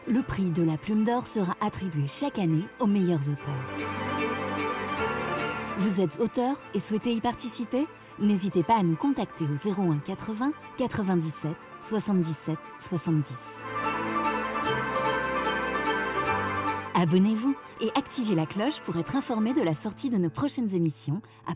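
Nothing stood out on listening; no technical problem could be heard anywhere in the audio.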